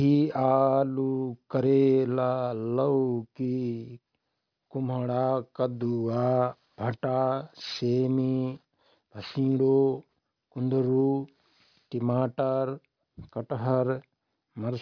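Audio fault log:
throughout, aliasing: gritty, metallic sibilants and a spectrum crammed against 5.5 kHz, where higher content folds back; fits an unfiltered drop to an 11 kHz rate.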